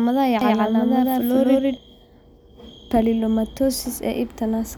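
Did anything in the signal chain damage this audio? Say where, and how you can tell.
Yes. From 0.41 to 1.77 s, there is a doubled audio track: an equally loud copy trails about 150 ms behind. It is likely from a slower second capture path.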